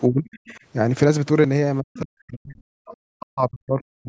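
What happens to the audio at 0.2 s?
At 0.2 s the speech sits inside a stretch of speech suppressed in double talk, running from 0.09 to 0.57 s. The level sinks deeply, by roughly 35 dB at its lowest, and the speech thins and breaks up. The likely cause is an echo canceller that, with both sides talking, could not tell this talker from loudspeaker echo and attenuated everything. Unlike a packet-loss dropout's abrupt silent gap, this is a ragged ducking spread over half a second.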